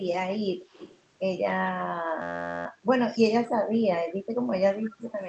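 From 0.7 to 0.99 s a faint, delayed copy of the speech trails the talker by about 217 ms, sitting roughly 20 dB down. It is an echo leak, likely from a far-end loudspeaker whose echo canceller let part of its microphone pickup return. The same echo recurs, much fainter at around 35 dB down, from 5.05 to 5.12 s.

Between 2.22 and 2.66 s the sound collapses into a steady buzz at 86.1 Hz. This is a system hang loop: the computer or driver stalled while the audio hardware replayed one 11.61 ms slice, which fits a 512-sample buffer, 38 times over.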